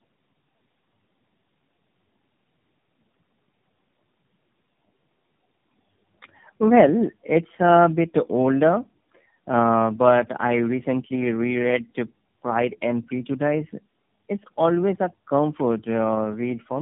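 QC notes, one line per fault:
throughout, tandem speech coding: the speech sounds rough, muffled and warbly, with nothing above about 3.8 kHz. It was decoded and re-encoded through three successive speech codecs, ending in AMR-NB, so each coder compounded the previous one's losses, which fits a chain running through GSM full rate and iLBC.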